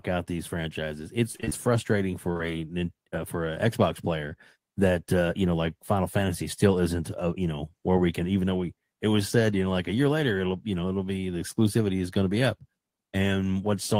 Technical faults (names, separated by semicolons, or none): repeated packet loss (robotic sound)